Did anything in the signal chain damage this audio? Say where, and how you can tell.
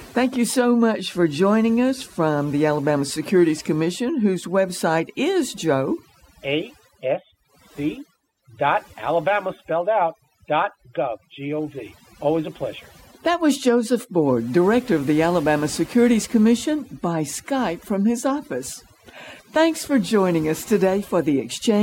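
Yes. Overdone noise removal was applied across the whole speech clip, at the processing stage. The background drops and breaks up into twinkling specks. An aggressive noise reducer shut off bands near its noise estimate, taking quiet speech detail with them.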